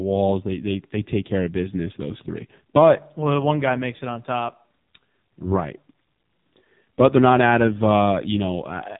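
From start to finish the speech carries heavy AMR narrowband mobile codec damage. Nothing above 3.8 kHz survives, so the sound is boxed and thin. The low bit budget, which fits the 5.9 kbps mode, lets the pulse-driven vocal-tract model turn the voice buzzy and synthetic.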